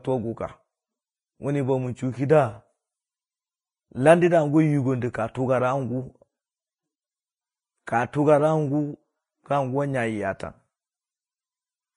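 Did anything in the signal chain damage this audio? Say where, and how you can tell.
Yes. Throughout the speech the treble is hissy and grainy, consonant attacks are smeared, and nothing survives above 10.6 kHz. This points to the codec stage, likely Vorbis compression at a low bitrate around 22 kbps, coarsely quantising upper bands into noise-like residue.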